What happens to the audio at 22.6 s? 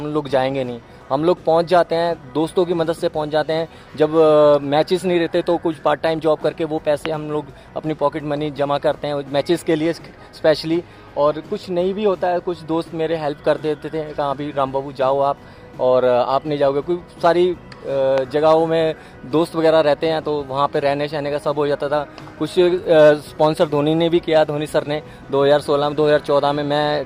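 Nothing goes wrong at 22.6 s; the audio runs through that moment intact, with no dropout, click or other fault to be heard.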